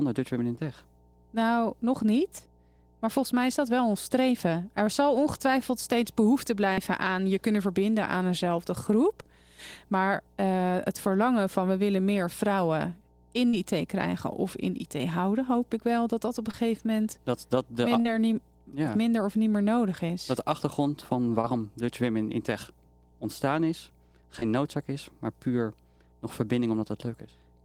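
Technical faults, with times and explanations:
throughout: mains hum. A steady 60 Hz tone sits about 30 dB below the signal, coupled in from the power line through a ground loop or nearby transformer. On a spectrogram it is a thin, unbroken horizontal line at 60 Hz across the whole clip.
0.55, 6.73, 13.49, 16.51, 18.01, 21.41 and 24.39 s: short concealed packet loss. At each point roughly 20 to 40 ms of audio, consistent with one or two 20 ms frames, failed to arrive. The decoder stretched the preceding sound across the hole and crossfaded back, producing a brief smear or wobble. On a spectrogram each one is a narrow, blurred vertical band. The waveform shows a repeated or flattened stretch there.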